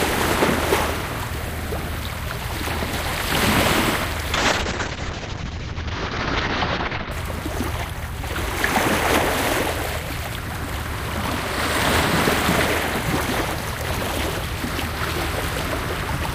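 A call bitrate drop runs from 4.35 s to 7.17 s. The link's bandwidth estimate collapsed, so the encoder was forced onto a tiny bit budget: the coarseness heard here fits a fall from around 128 kbps to something near 7 kbps, held at its lowest for about 2.8 s. At that starved rate the codec trims the top of the spectrum, pulling the audio band from 20 kHz down to 8 kHz, so the sound turns muffled, rough and watery until the bitrate recovers.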